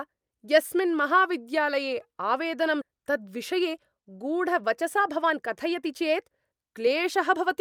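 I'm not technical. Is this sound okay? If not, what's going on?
No. At 2.81 s there is a skip ahead: the system fell behind and threw away audio that was waiting to be played, roughly a second of speech. Playback jumps straight across that gap, so part of what was said is simply missing.

Next comes a jitter buffer speed-up. Audio had piled up in the holding area, so the system trimmed tiny slices out repeatedly to catch up. From 2.92 to 4.11 s and again from 4.62 to 7.60 s, the speech runs about 7 to 8 percent fast and sounds hurried, though the pitch stays the same.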